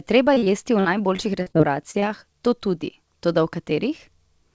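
Repeated packet loss (robotic sound) runs from 0.34 to 2.04 s in this speech recording. Roughly ten short holes, the longest about 47 ms, were each patched by stretching the preceding sound, so about 15% of that stretch is concealed and sounds choppy with pieces missing. Dropped samples then produce a single sharp click at 2.94 s, most likely from a couple of samples missing, so the waveform jumps abruptly without removing any audible sound. The audio carries nothing above 8 kHz, which fits a G.722 call path.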